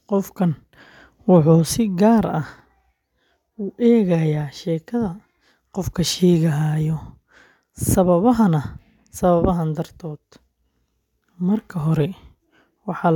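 Nothing here stands out as a technical fault; the speech comes through steadily with no dropouts, glitches or interruptions anywhere along the way.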